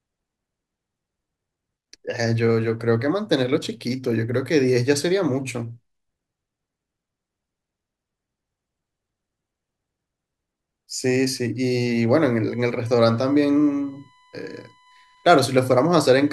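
Current drawn by the USB bus in its 1 ms frames leaks into the audio through the power or ground path, producing USB whine from 12.50 s to the end of the clip. The interference repeats a thousand times a second, so it is heard as a thin, steady whine at a fixed 1 kHz pitch. It sits well below the speech, roughly 35 dB down.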